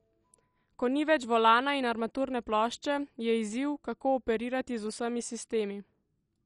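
Throughout the speech, the sound is dull, with nothing above 11.3 kHz, and carries a gurgling, granular edge as upper sub-bands flicker on and off. This points to likely MP2 compression at a low rate near 48 kbps. The flickering bands set it apart from a plain low-pass filter.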